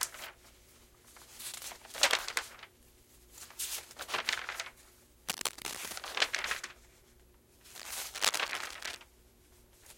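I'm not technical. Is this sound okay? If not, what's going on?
No, there's cable scratch noise: bursts of scratchy rustling, about as loud as the sound itself, from 5.29 to 5.93 s and 7.76 to 8.96 s, likely a worn cable or connector being moved.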